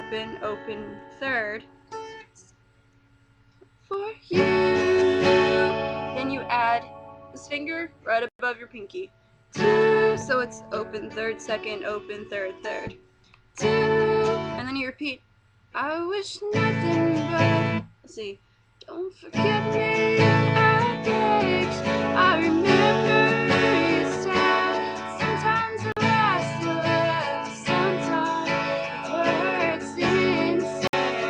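At 25.92 s the audio cuts out for about 44 ms, and at 30.87 s for about 58 ms. Both are brief holes, likely a Bluetooth dropout from a few lost packets. Unlike a stall, the sound resumes further along, as if it had kept playing.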